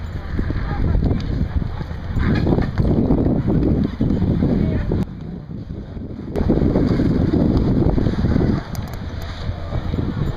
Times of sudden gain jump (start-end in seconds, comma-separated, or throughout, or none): 5.03-6.36